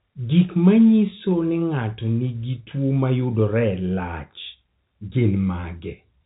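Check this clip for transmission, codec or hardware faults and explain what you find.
Nothing here points to a transmission, codec or hardware fault; the speech just has the narrow telephone character of G.711 coding, with nothing above 4 kHz, which is exactly what that format does.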